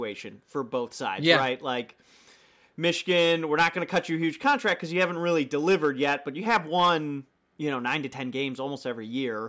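Nothing in the recording comes across as a technical fault at any point, so there's nothing here to flag.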